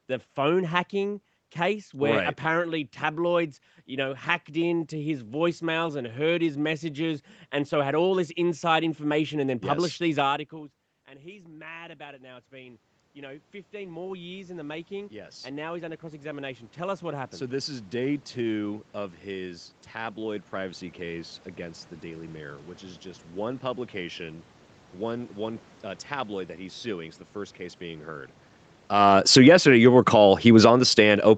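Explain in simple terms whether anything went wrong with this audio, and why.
At about 10 seconds the talker moves away from the microphone and the speech drops sharply. This triggers an automatic gain rising. From 10.49 to 21.86 s the gain control, finding the input too quiet, slowly turns itself up to compensate. Because the gain acts on everything the microphone picks up, the speech and the room noise behind it swell together over roughly eleven seconds instead of snapping back at once.

Near the end the talker moves again, around 29 seconds, and the gain control finds the input too loud or its background too strong. An automatic gain falling follows from 28.89 to 30.97 s. The gain control pulls its gain down gradually, so the sound starts loud and then sinks along with its background, a slow fade that the talker did not produce.

Overlapping that, a second automatic gain rising begins at 29.6 s and runs to the end of the clip. 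The gain control starts pushing the level back up before the downward correction has finished, so the final second or so carries a renewed swell of speech and room noise together. The two adjustments working against each other make the level wander in the closing stretch.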